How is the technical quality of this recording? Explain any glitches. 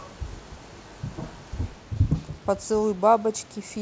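No technical faults are audible.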